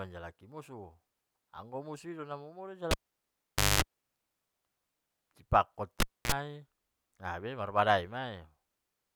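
Speech, interrupted twice by a cable pulled and plugged in, at 2.91–3.82 s and 6.00–6.32 s. Each shows a pop spike, a flat dropout (0.86 s, then 0.27 s), then mains buzz while only the tip contacts: 0.22 s of 50 Hz and 44 ms of 60 Hz, drawn as harmonic stripes, before a closing pop.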